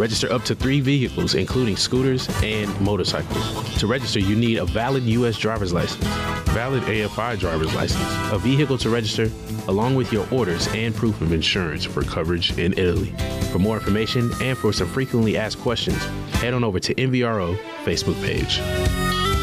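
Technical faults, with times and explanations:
6.50–7.74 s, 11.19–12.76 s and 18.40–19.25 s, drift correction step: each time the playback suddenly slows by about 6.5% and drops about 116 cents, a little over a semitone, holds there, then snaps back to normal. This is likely a clock-matching stage changing rate in one jump to refill its buffer. The flat, stepped offset with tempo and pitch moving together sets it apart from the gradual, wavering pitch of wow or flutter.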